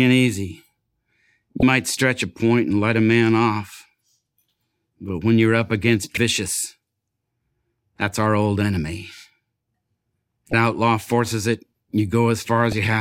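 A speech recording with four short bursts of damaged data in a compressed stream, at 1.60–1.63 s, 6.14–6.18 s, 10.50–10.54 s and 12.72 s. Each lasts roughly 30 ms, the last only about 10 ms, and sounds like a brief chirp, squawk, click or short hole. Corrupted bytes made the decoder misread the affected frames and lose sync until it locked onto the next valid frame header.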